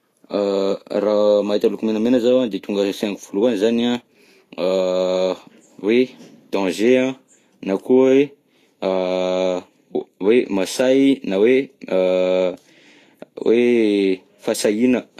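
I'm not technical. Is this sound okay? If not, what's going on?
No, not quite. The speech sounds hissy and grainy from start to finish, with dulled treble, which is likely Vorbis compression squeezing the file too hard.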